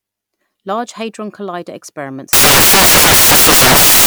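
Samples built from the wrong bytes, from 2.33 s to the end: misassembled bytes push fast-changing low bits to the top, turning the speech into loud, harsh broadband noise.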